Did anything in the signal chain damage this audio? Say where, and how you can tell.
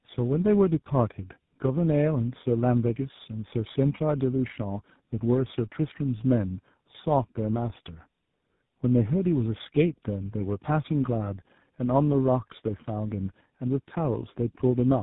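Yes. The damage sits at the codec stage and runs through the whole clip. This is tandem speech coding. Nothing reaches above 3.8 kHz, so the speech is band-limited and muffled. It also sounds rough and warbly, more than any single phone codec would leave it. That layered roughness points to two speech coders in a row, likely AMR-NB feeding GSM full rate across a G.711 link. Each coder re-encoded the degraded output of the one before.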